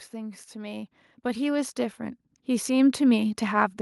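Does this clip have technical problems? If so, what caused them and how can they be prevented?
Yes. Automatic gain rising runs from 0.1 s to the end at 3.8 s. The gain control judged the input too quiet and kept raising its gain, so the voice and the background noise swell together. On a waveform the envelope widens steadily. On a spectrogram every band brightens, including the noise floor between phrases. To prevent it, set the microphone input level correctly before the call, or fix the gain so the control never has to climb.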